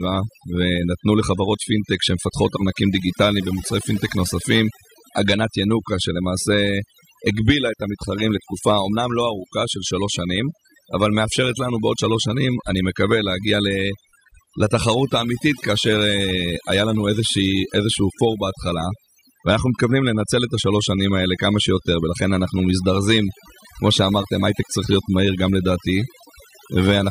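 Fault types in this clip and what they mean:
Overdone noise removal: heavy noise reduction mutes frequency bands near the noise floor throughout the speech, leaving near-silent gaps with twinkling specks and taking quiet parts of the voice with them.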